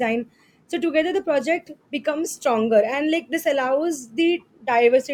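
At about 2.24 s, running to 2.26 s, there's a corrupt frame decoded: a short squeaky blip cuts across the speech for roughly 20 ms. Some bits in the compressed stream got flipped, and the decoder played the damaged data anyway, misreading gains and codes so energy lands at frequencies where it doesn't belong. It covers about a couple of frames, peaking around -15 dBFS.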